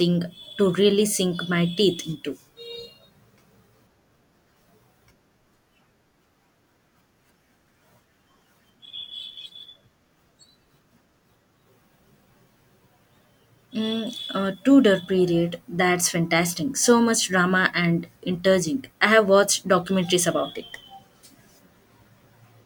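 Speech, with nothing technically wrong with it.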